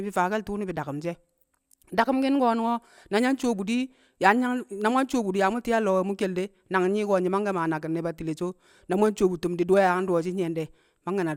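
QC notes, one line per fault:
No faults heard anywhere in the speech.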